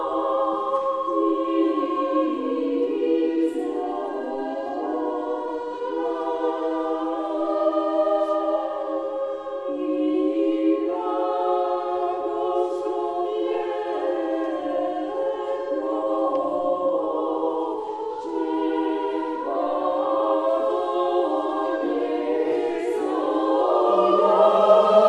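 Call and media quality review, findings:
Dull, band-limited top end with gurgling, granular distortion throughout; likely MP2 compression at a low bitrate, consistent with about 80 kbps, upper sub-bands dropping out and coarsely quantised.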